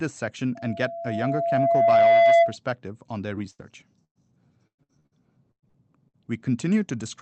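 From 0.55 to 2.56 s, a loudspeaker feedback squeal rises at 676 Hz. The loop between microphone and speaker has gain above unity there, so the tone swells over roughly a second and a half to about 10 dB above the speech. It stops just before "on their". A spectrogram shows one bright horizontal line thickening as it climbs.

Right after "on their", from 3.35 to 6.16 s, repeated packet loss gives choppy, robotic sound. About ten gaps, the longest 110 ms, are patched by stretching the preceding audio, and concealment fills about a quarter of the stretch. The waveform shows smeared, repetitive segments. The spectrogram shows blurred harmonic streaks up to the call codec's 8 kHz ceiling.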